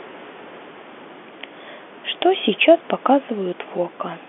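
Nothing here goes wrong: the speech simply arrives over an ordinary G.711 telephone line, with nothing above 3.7 kHz, while a quiet room noise sits about 21 dB beneath it.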